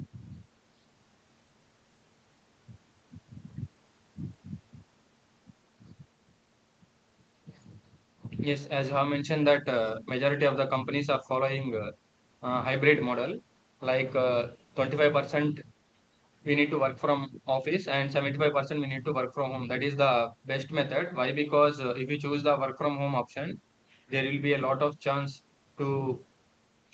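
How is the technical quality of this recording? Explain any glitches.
The technical quality of this recording is sound, with no glitches to explain.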